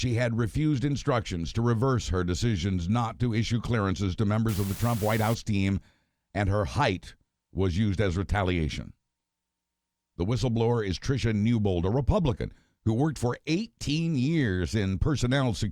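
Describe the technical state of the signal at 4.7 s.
At 4.7 s you're right in the middle of an unreliable data bit problem that runs from about 4.49 to 5.34 s. One bit line in the sample data is flaky, so a random scattering of samples come out with that bit flipped. Each flip throws in a spike of identical size, about -31 dBFS, and together they make a steady crackly fizz laid over the speech that doesn't let up even in the gaps.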